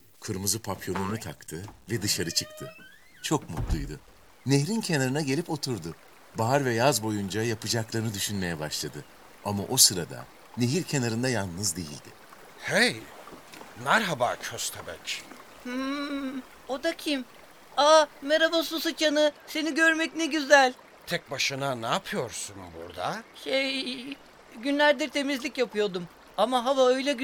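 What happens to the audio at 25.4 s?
Nothing goes wrong at 25.4 s; the audio there plays through intact, with no dropout, click, distortion or other fault.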